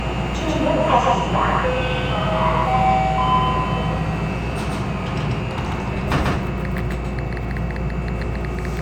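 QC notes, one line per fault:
Throughout, doubled audio track: an equally loud full-band copy trails by around 150 ms with no decay or room colour, likely a second capture path running late.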